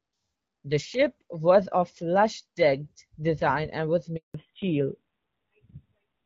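At 4.16 s the speech cuts out in a handover gap lasting 180 ms, until 4.34 s, as the call switches networks and no frames arrive. Unlike packet loss, there is no concealment smearing or repeated fragment, just a quick fade into silence.

From 4.34 s to the end, the call falls back to narrowband. Before the gap, the HD Voice codec keeps speech lightly coded and clear. Afterwards, nothing remains above 4 kHz, and the duller, rougher sound fits AMR-NB at 7.4 kbit/s. It stays that way to the end rather than recovering like a brief dropout.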